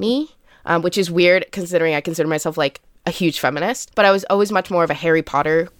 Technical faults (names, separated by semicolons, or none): none